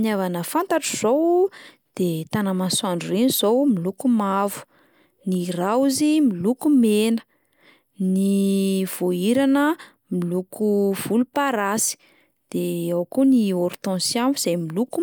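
No technical faults can be heard anywhere in this speech recording. There is no moment in it that calls for a time or a value to be given.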